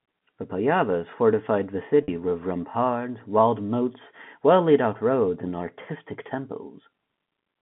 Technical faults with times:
2.03-2.08 packet loss with pitch repetition

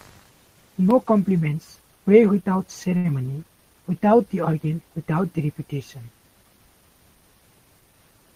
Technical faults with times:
2.97-3.06 short stall from a late packet

